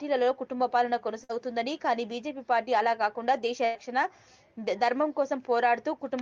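At 1.23 s and again at 3.65 s there is a burst of packet loss: about 60 ms, then about 100 ms, never arrives. The receiver stretches the preceding sound and fades it out, and playback resumes with that stretch of audio missing.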